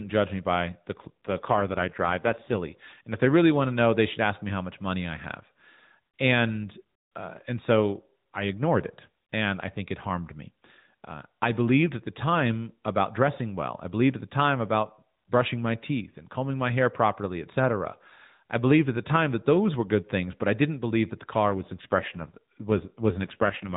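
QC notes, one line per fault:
0.99–2.58 s (after "judge me by the") and 21.50–23.76 s (after "didn't believe that the"), AMR rate drop: the codec was pushed to a lower mode, consistent with 12.2 falling to 5.9 kbps. Fewer bits for each excitation pulse make the speech buzzier and more synthetic, with no gap and the same narrow band.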